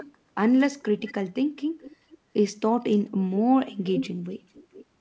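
Echo leak at 0.0, 1.0, 1.8, 2.91, 3.94 and 4.54 s: short delayed copies of the speech trailing by 432 to 448 ms, mostly faint but prominent near 3.94 s, likely from incomplete echo cancellation at a loudspeaker end. The speech above 8 kHz is cut off by the G.722 call path.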